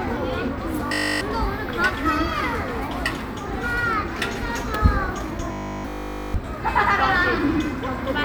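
Robotic sound from repeated short buffers, from 0.87 to 1.21 s and again from 5.52 to 6.34 s: the audio collapses into a rigid metallic buzz at 50 Hz, which fits a 20 ms slice being looped. Nearly all of the real sound is skipped, likely because new audio arrived too seldom.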